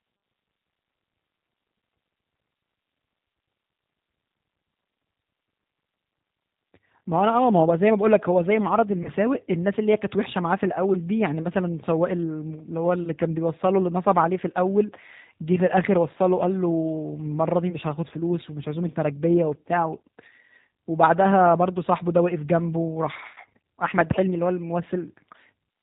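A speech recording carried through the G.729 codec for its whole length, at 8 kbit/s, with plainly audible damage. The codec resynthesises the voice from a vocal tract filter, a pitch predictor and sparse pulses, so the sound comes across rough and synthetic, and nothing above 4 kHz survives. At 9.03 to 9.10 s there is VoIP packet loss concealed by the speech codec. About 20 ms of audio went missing, which fits a single lost packet. The decoder filled the gap by extending its last pitch and filter with falling gain, so the sound smears into a brief buzzy tone or coloured noise that fades. Because each frame builds on the one before, the voice stays weak or distorted until about 9.10 s, after the missing audio ends.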